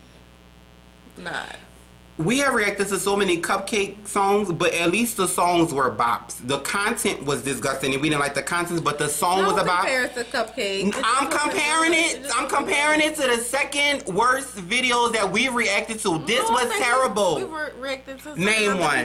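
Switching spikes from a dimmer, rectifier or missing shield get into the signal path, causing mains buzz throughout: a steady, raspy 60 Hz hum roughly 30 dB below the sound.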